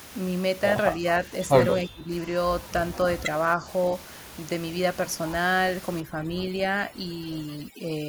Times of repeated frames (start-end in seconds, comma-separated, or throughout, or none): none